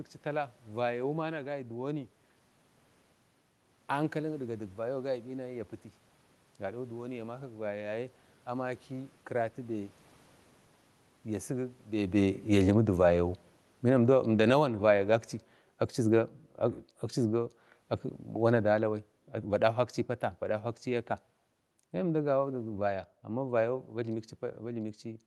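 From 11.9 s to 23.8 s, automatic gain falling lowers the level by about 14 dB; unlike a talker moving back, the room noise sinks along with the speech.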